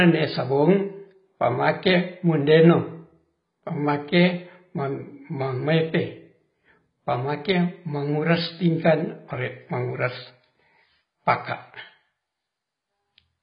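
It's a speech recording, and the whole thing carries heavy AAC compression damage. There's essentially nothing above about 5.1 kHz, so it sounds dull, and the sibilants come out smeared and fizzy with a watery warble. That points to AAC-LC squeezed to a very low rate, something like 16 kbps, where the encoder likely dropped its bandwidth and starved the upper bands of bits, leaving gaps filled with mush.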